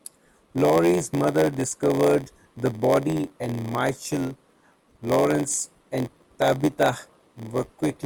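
Speech, with a block size mismatch (padded) running through the whole clip. A steady buzz at 86.1 Hz sits under the talker, and the speech plays back slower, at 0.938 times normal speed, with its timbre unchanged. That pattern fits a stage writing blocks of around 480 samples into one reading 512. Each block is topped up with a short run of zeros, so a tiny silence recurs at the block rate, which stretches the timing and produces the buzz.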